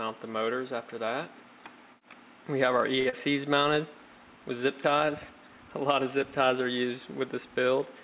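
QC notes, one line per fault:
3.00–3.07 s, short stall from a late packet: a packet arrived after its playout time, so the jitter buffer ran empty and the receiver held the last stretch of sound for 54 ms until the data turned up, then carried on from the same point. No audio is lost. The sound is drawn out in place at that moment, and playback runs 54 ms later from there on. The band stays capped at 4 kHz, consistent with G.711 mu-law at 64 kbps on this call path.
3.09–3.14 s, short concealed packet loss: 40 ms of audio never reached the decoder in time and is missing. The receiver filled the hole with 31 ms of synthesized continuation of the preceding sound, built either from its pitch or as shaped noise depending on what came before, then blended back into the real signal. This is heard as a brief smear or wobble right after the stall. Because less was filled than was lost, that passage comes out about 9 ms shorter.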